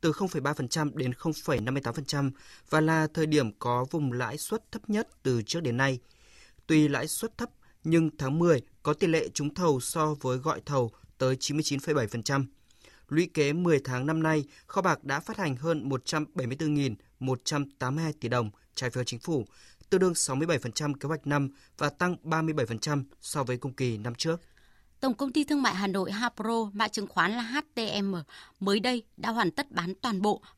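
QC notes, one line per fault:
1.58 s, chunks out of order: one block of roughly 5.33 ms is played one block late, so it lands after the block that should follow it. Nothing is dropped, but the swap creates three hard joins within about 10 ms, where the waveform jumps instead of continuing. These are heard as a brief jumbled flicker in the speech.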